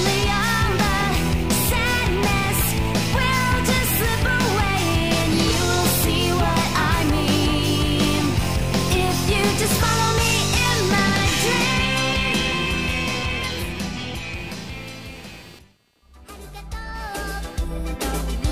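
Throughout the clip, computer activity noise leaks into the audio path: shifting load on the machine's processor or graphics hardware disturbs the ground that the audio circuitry shares, injecting a pulsed electrical signal. It repeats at a rate of roughly 200 per second, giving a buzzing, chirping texture that sits around 25 dB below the main sound. Its rise and fall follows what the computer is doing, not anything in the audio itself.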